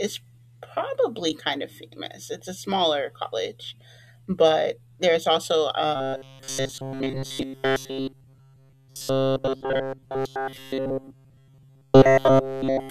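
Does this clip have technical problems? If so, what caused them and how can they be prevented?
Yes. Right after "college but there's also", at 5.96 s, the speech collapses into robotic sound from repeated short buffers and stays that way through 12.90 s. Essentially the whole stretch is looped audio, giving a rigid metallic buzz at 134 Hz, which points to a chunk of roughly 7.5 ms being replayed. The likely cause is audio arriving too slowly, so the playback side kept repeating that chunk while the real audio got skipped. Bigger buffers or a less loaded audio path should prevent it.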